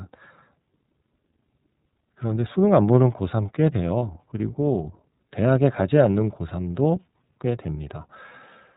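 Speech coded throughout with the iLBC codec, with plainly audible rough, synthetic coloring. A spectrogram shows nothing above 4 kHz, as expected of this narrowband codec, here using 30 ms frames at about 13 kbps. From 3.98 to 4.02 s, lost iLBC frames cause a single 30 ms dropout. The decoder fills it with a repeated, slightly buzzy pitch cycle, seen as a flat, evenly periodic patch in the waveform, and the speech recovers immediately afterwards.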